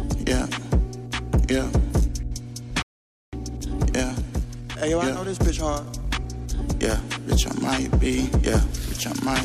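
Mains hum runs under the whole clip as a steady low tone at 60 Hz, with some low harmonics above it. It sits roughly 15 dB below the wanted signal. A ground loop or a nearby transformer is coupling the power line into the signal path. The 60 Hz fundamental points to a supply on a 60 Hz grid rather than a 50 Hz one.

At 2.82 s the sound cuts out mid-flow and stays silent until 3.33 s, a gap of about 0.50 s. This is a playback stall. The output went dead because the player most likely ran dry of buffered data or had its audio thread blocked, then resumed once it recovered.

From 3.33 s to 6.33 s the audio runs hurried, at 1.15 times normal speed, while the pitch stays where it should be. This is time-compressed catch-up. After the stall, the player works off its accumulated backlog by removing small slices of audio and cross-fading across the joins. Normal pacing returns at 6.33 s.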